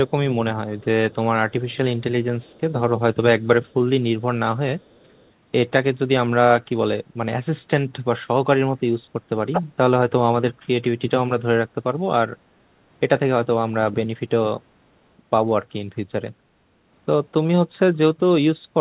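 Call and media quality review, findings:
Echo leak, 0.79–1.15 s, 1.5–2.03 s, 2.41–2.61 s and 4.82–5.3 s. Far-end echo canceller likely leaving residual loudspeaker pickup. A faint copy of the talker returns 424 ms late, about 35 to 40 dB below the speech, in short scraps.

Speech suppressed in double talk at 6.27–6.33 s, 9.56–10.12 s and 17.62–17.98 s. The echo canceller's suppressor likely misreads near-end speech as echo while both sides talk. Near-end level dips up to roughly 25 to 30 dB, in brief stretches lasting a few tenths of a second at most.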